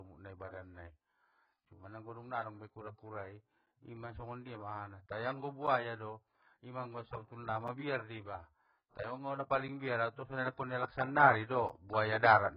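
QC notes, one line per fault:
throughout: AAC compression, heavy. Nothing above 5.1 kHz, so the speech sounds dull, smeared and fizzy, likely from low-bitrate AAC-LC. A spectrogram shows a flat ceiling and patchy holes.
1.65, 3.66, 5.67, 7.68, 9.68, 11.69 s: gap between chunks. 7 ms silences every 2 s mark the chunk joins. They appear as flat dropouts in the waveform and thin blank vertical stripes on a spectrogram.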